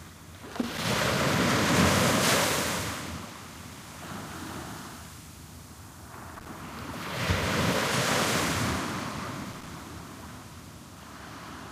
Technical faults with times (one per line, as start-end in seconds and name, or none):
0.53-0.92 loose connector crackle
6.35-6.50 loose connector crackle
9.51-9.68 loose connector crackle